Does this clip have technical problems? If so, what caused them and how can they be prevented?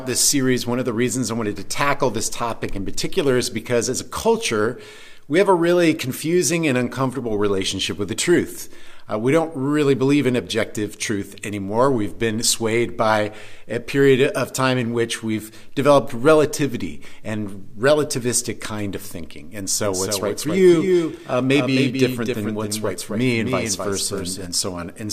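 Yes. From 19.84 s to 24.46 s there is a doubled audio track: a second full-band copy of the sound trails the original by roughly 0.3 s, at about 5 dB lower level. It has no decay or room colour, so it reads as a distinct repeat rather than an echo, and it cuts in and out abruptly at those times. The likely cause is a second capture path or an edit layering two misaligned copies. To prevent it, route each source through a single capture path and check edits for overlapping duplicate regions before export.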